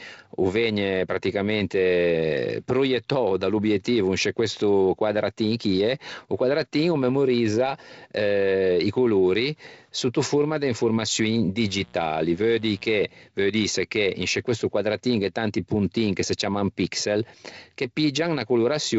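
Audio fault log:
11.57–13.07 s, mains buzz: A steady, raspy buzz enters right after "sotto forma de informaçioin" and stops just before "veu dîse che in". It sits roughly 30 dB below the speech. Sharp switching spikes, twice per cycle of a 60 Hz supply, are leaking into the signal path. Their harmonics stack up well into the kilohertz range. That gives the buzz its rough edge rather than a smooth hum, even through the wideband telephone coding, which cuts off near 7.7 kHz.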